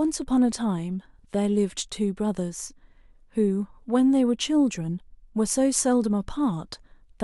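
Speech recording with no audible technical faults.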